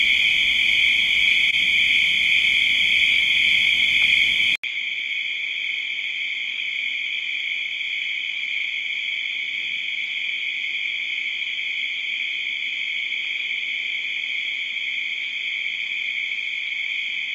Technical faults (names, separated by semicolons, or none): input switched to a poorer device